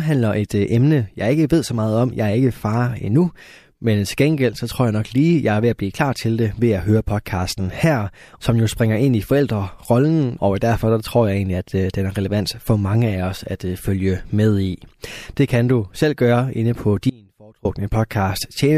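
At 17.10 s, just after "selv gøre inde på", the signal path likely lost its source while the stages downstream stayed live, giving an audio dropout to a faint residue. For about 0.55 s, until 17.65 s, the speech cuts out abruptly and only a faint trace of sound remains, roughly 30 dB below the normal level. It then snaps back in mid-flow, with none of the gradual decay a pause or fade would have.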